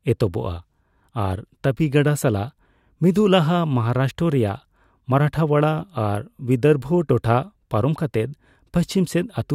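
Speech recording; no technical faults heard anywhere in the clip.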